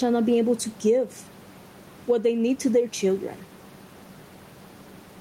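Throughout the speech, gain pumping is heard: the room noise sits about 32 dB below the voice, and the gain swings by around 10 dB, likely from excess gain driving a fast limiter. Unlike a noise gate, the background never drops out.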